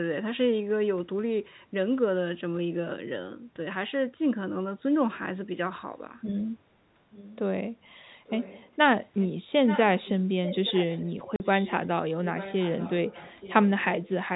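Speech carrying an echo leak, a faint-to-moderate copy of the talk trailing it by 875 ms, at 7.12–7.38, 8.25–8.71, 9.2–9.27, 9.66–10.09, 10.45–11.75 and 12.33–13.85 s. The fixed long delay marks it as likely loudspeaker pickup escaping echo cancellation rather than room reverberation. Packet loss filled with silence cuts a clean 40 ms hole at 11.36–11.40 s, whose hard edges set it apart from the smooth concealment that fills gaps with synthesised sound.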